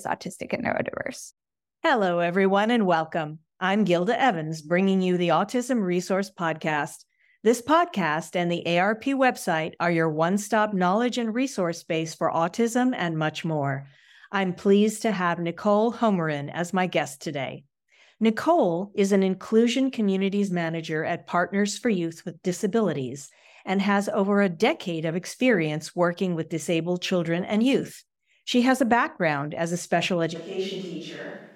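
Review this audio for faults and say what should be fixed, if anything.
At 30.36 s, right after "background as a special", the sound turns abruptly roomy and hollow, thinner in the bass and about 10 dB quieter, with room noise roughly 40 dB below the speech, through to the end at 31.56 s. This is a switch to a distant microphone, likely because the close microphone dropped out and a farther one took over. Monitor the close microphone continuously and check its connection and battery before recording.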